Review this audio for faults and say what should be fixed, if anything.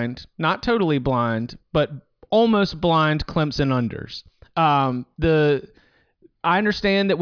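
Nothing stood out on listening, so there is nothing here to fix.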